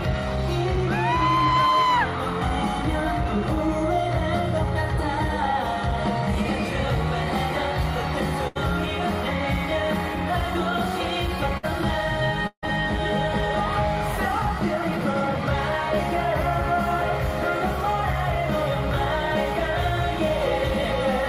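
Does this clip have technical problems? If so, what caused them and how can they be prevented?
Yes. Bursts of packet loss occur at 8.47 to 8.57 s and 11.57 to 11.65 s. The receiver stretched and faded the last sound over the roughly 80 ms and 60 ms gaps, then skipped ahead. Because the fill never reaches silence, these are bursts rather than dropouts. Stronger forward error correction and a larger jitter buffer prevent them.

A long network dropout at 12.47 to 12.64 s is likely behind a longer fade that sinks into about 80 ms of silence before the sound resumes further on. Reaching true silence distinguishes it from the shorter bursts. A more stable connection, such as wired instead of congested Wi-Fi, prevents it.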